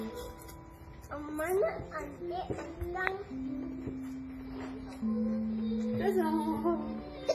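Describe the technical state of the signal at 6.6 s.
At 6.6 s, as everywhere in the clip, the audio carries heavy damage from what is likely WMA compression, with a character that fits a low-rate stream around 24 kbps. The long-block transform smears quantisation noise over tens of milliseconds and drops weak components, so the sound rings and washes, with hiss swelling and fading alongside the signal. A spectrogram shows a hard ceiling at 15.3 kHz, patchy holes where faint detail was zeroed, and blurred onsets.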